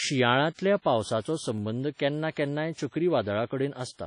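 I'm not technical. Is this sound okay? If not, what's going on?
No. The speech has a washy, ringing quality with hiss that rises and falls with the voice. This likely comes from WMA compression, which rounds off detail in long time blocks and smears small errors around each sound.

There are also two single sharp clicks, at 1.58 s just before "केन्ना केन्नाय" and at 2.80 s just after "केन्ना केन्नाय". Each is likely dropped samples: a tiny sliver, well under a millisecond, is missing, so the waveform jumps abruptly.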